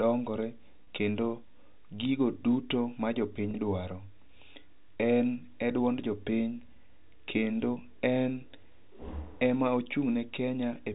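At 0.84 s and again at 3.51 s, just after "gigo duto ma", the speech briefly holds and buzzes. These are packet loss with pitch repetition. Each gap is about 30 ms, which fits a single lost packet. The receiver filled each gap by repeating the last pitch period. That gives a short, slightly held buzzy tone before the speech resumes. Both gaps are brief, so neither fades into silence. The G.711 telephone band carries the rest.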